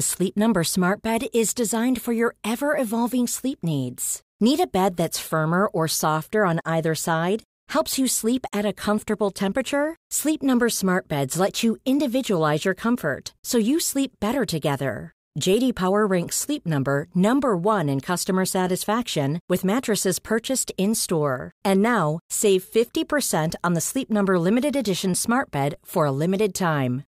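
At 25.74 s a DC step shifts the waveform's zero line by about -32 dBFS, heard as a low thump under the speech; the offset then decays as a 20 Hz high-pass drains it.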